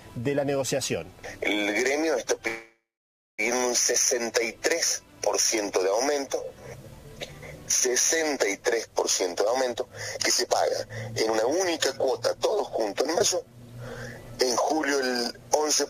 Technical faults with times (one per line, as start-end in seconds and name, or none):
2.47-3.41 call audio freeze
9.36-11.65 jitter buffer speed-up
12.06-13.02 jitter buffer speed-up
13.19-13.22 skip ahead